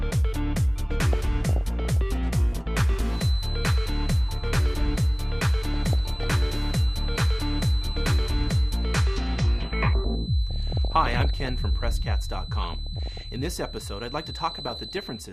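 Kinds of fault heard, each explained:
DAB burbling: Weak digital radio reception lets bit errors slip past error correction into the compressed audio. Corrupted data throws short blips of noise into narrow frequency bands. Five bubbly, watery bursts appear, near 1.1, 5.7, 10.5, 12.6 and 14.5 seconds.
Feedback whistle: A thin, steady 4 kHz tone sits behind the sound from about 3.1 seconds to the end, about 15 dB below it, slowly swelling and fading. The likely cause is a loudspeaker-to-microphone loop ringing just short of a full howl.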